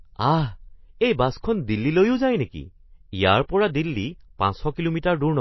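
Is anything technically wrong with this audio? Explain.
Yes. MP3 compression, throughout: nothing sounds above 5.8 kHz and the speech turns watery and swirly, likely from an encoder starved of bits, consistent with roughly 24 kbps.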